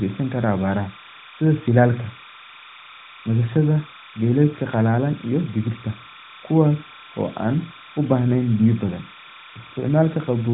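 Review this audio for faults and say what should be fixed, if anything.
Linear timecode running at 30 frames per second has leaked into the speech path from a neighbouring track or cable, and it is present for the whole clip. Because the code is a square wave flipping between two pitches near 1 kHz and 2 kHz, it comes through as a steady chirping warble behind the speech, roughly 20 dB below it. Both tones sit inside the narrowband mobile channel, which passes nothing above 3.9 kHz, so the band limit does nothing to remove them. To prevent this, keep timecode on separate, well-shielded cabling and tracks away from audio lines, and check the mix for isolation before recording.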